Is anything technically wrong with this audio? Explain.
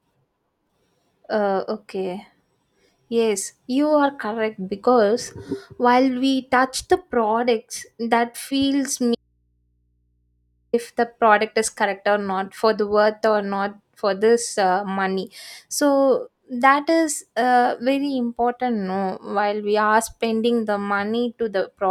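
Yes. From 9.15 s to 10.73 s the speech suffers an audio dropout to a faint residue, lasting about 1.58 s. The signal cuts off abruptly and leaves only a low mains hum, roughly 45 dB below the speech. The likely cause is a brief loss of the source while the downstream input stayed open and picked up hum. On a waveform this shows as a sudden near-flat stretch. A spectrogram shows the speech energy vanishing, with only thin horizontal hum lines left.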